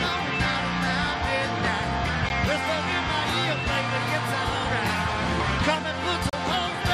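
At 2.29 s and again from 6.30 to 6.33 s there's a gap between stream segments: mismatched timestamps leave short hard-edged holes of silence, spaced 4 s apart, with no audio lost.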